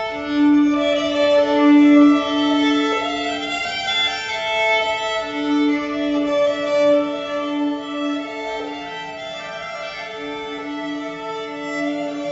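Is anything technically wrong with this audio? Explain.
No, nothing technical stands out here, and it comes across just as it should all the way through.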